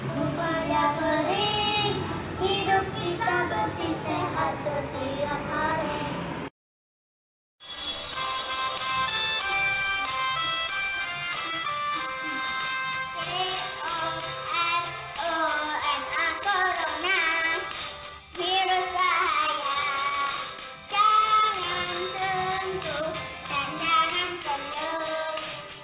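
Nothing goes wrong anywhere in this one; there's no technical fault to point to at any moment of the audio.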